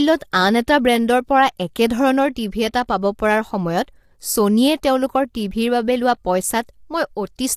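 From start to finish the speech sounds rough and grainy, with noise between the harmonics and a dull top end, likely low-delay AAC compression at something like 32 kbps. At 1.59 s there's a brief pre-echo: the codec smears about 11 ms of hiss ahead of the attack on "একেধৰণৰ টিভি এটা পাব", so its onset sounds softened.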